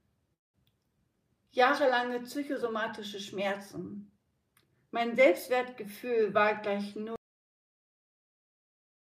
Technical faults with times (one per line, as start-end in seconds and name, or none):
7.16-9.01 cut-off end